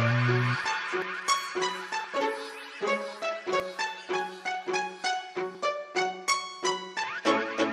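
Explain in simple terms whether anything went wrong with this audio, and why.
Yes: at 1.02, 2.04, 3.6, 4.67, 5.55 and 7.04 s the sound jumps ahead, skipping a few hundredths of a second each time. That is likely a dropped buffer (overrun). Unlike a dropout, no silent gap is heard, just an abrupt splice.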